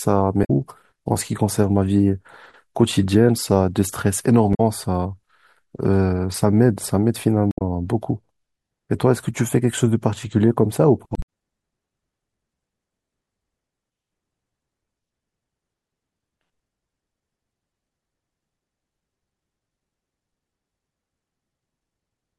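Damaged data in a compressed stream breaks the speech four times, at 0.41, 4.51, 7.51 and 11.13 s, each for about 0.1 s. Corrupted bytes leave the decoder misreading frames and hunting for the next header, producing a brief chirp, squawk, click or short hole.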